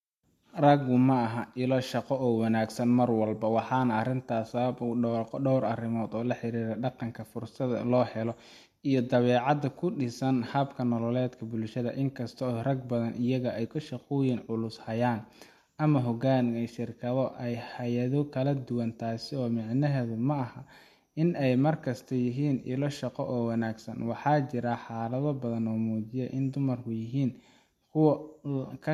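No technical faults can be heard anywhere in this recording of speech.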